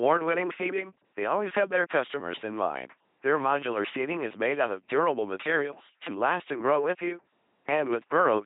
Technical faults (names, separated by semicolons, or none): LPC-10 vocoder